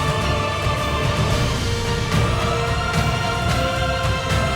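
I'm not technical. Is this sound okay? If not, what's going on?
No, there's a faint, steady high-pitched whine sitting under the sound the whole way through. That's USB whine: the computer's USB connection pulses power a thousand times a second, and that leaks into the audio as a fixed 1 kHz tone.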